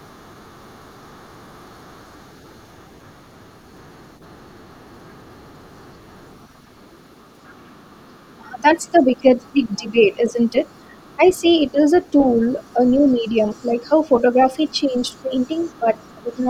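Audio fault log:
0.0–11.74 s, other side's voice leaking through: a faint second voice sits roughly 30 dB below the talker, likely loudspeaker echo that the echo canceller did not fully remove.
8.38–10.56 s, speech suppressed in double talk: the talker's voice drops in pieces by up to about 20 dB, around a second in all, likely the canceller ducking everything while both sides speak.
11.16–11.74 s, speech suppressed in double talk: a brief dip of about 10 dB lasting a fraction of a second, likely the canceller pulling the talker down along with the overlapping echo.
12.07–16.44 s, other side's voice leaking through: the second voice returns fainter, roughly 35 dB under the talker, likely residual loudspeaker echo picked up by the microphone.
13.55–13.9 s, 15.22–15.87 s, 16.23–16.39 s, speech suppressed in double talk: short dips of about 10 to 15 dB chop into the talker, likely the canceller turning both voices down during overlaps.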